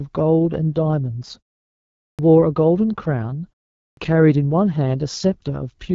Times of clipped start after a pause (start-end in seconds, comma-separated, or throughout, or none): 2.05-2.19, 3.84-3.97